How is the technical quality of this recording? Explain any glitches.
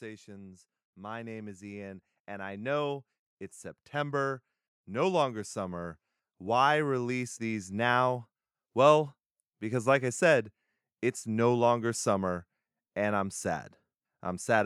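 The level of the speech does not hold steady; it climbs twice in slow swells. From 0.05 to 3.03 s, and again from 3.92 to 7.97 s, voice and background noise grow louder together, by about 6 dB and then about 8 dB. That is automatic gain rising: the gain control judged the input too quiet and pushed its amplification up gradually over several seconds, lifting everything in the signal rather than the voice alone.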